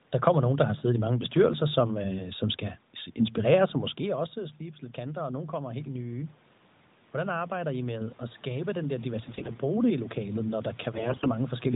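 It's a speech recording over a narrowband mobile link, with room noise underneath, a talker shift around 3.5 s, and band-limiting that points to AMR at a fairly high rate such as 12.2 kbps. The first problem is automatic gain rising. From about 7.13 s to 11.53 s the level going in drops by about 14 dB, and the automatic gain control responds by slowly pushing its gain up about 5 dB. You hear the voice and the room noise swelling together over those four seconds instead of the voice coming back cleanly.

The second problem is AMR bit errors, in two bursts at 9.26–9.61 s and 10.94–11.31 s. Roughly one bit in ten got flipped in the weakly protected part of each frame while the checksum still passed, so the decoder used wrong pulse positions and slightly wrong gain and spectral values. The pitch and level hold roughly steady, but the sound goes hoarse, scratchy and gargly in those stretches.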